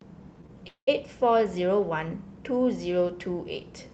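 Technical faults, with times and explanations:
0.68–0.89 s, call audio freeze: sound trails into a fading buzz, then silence, and resumes where it stopped with nothing skipped, unlike a dropout; likely late packets.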